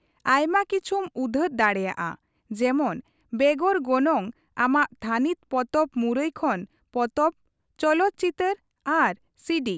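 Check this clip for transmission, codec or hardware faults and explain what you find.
No fault can be heard anywhere in the speech. Nothing in the recording calls for an explanation.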